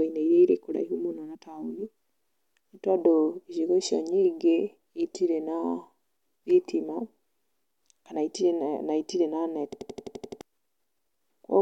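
A rapid machine-gun stutter takes over the speech from 9.73 to 10.41 s, as one fragment of about 85 ms repeats exactly eight times at roughly 11.7 Hz. This is a system hang loop: the computer or audio driver stalled, and the sound hardware kept replaying the same ring buffer, whose length fits a 4096-sample buffer. The speech that should have filled those repeats, about 0.7 s of it, is gone.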